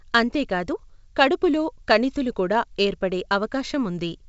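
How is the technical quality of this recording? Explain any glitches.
No glitches to speak of here: the speech comes across as a regular G.722 wideband telephone recording at 64 kbit/s, with the sound simply topping out around 7.7 kHz as that coding does.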